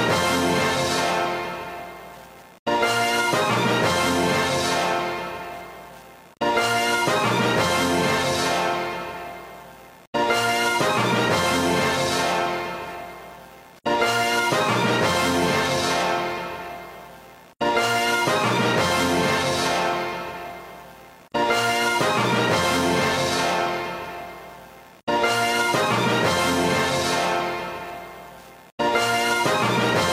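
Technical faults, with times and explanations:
13.31–25.31 s: adaptive stream at a lower bitrate. The quality drops suddenly, with no gap, and recovers just as abruptly twelve seconds later. Across that stretch the top end loses its natural detail and turns hazy and synthetic. Coding artefacts grow more audible. The stream has switched to a lower-bitrate version, likely because the connection slowed. The character of the change fits a move from full-band AAC near 96 kbit/s to HE-AAC near 32 kbit/s, where the treble is rebuilt rather than coded.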